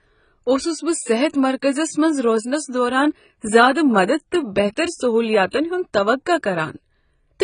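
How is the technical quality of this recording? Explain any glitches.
The recording is poor, with heavy damage throughout. For the whole clip, nothing is heard above 9.6 kHz. The speech sounds dull and smeared. Sibilants and held sounds warble and fizz. The likely cause is AAC compression at a bitrate around 16 kbps. The encoder drops the top band and coarsely quantises the rest.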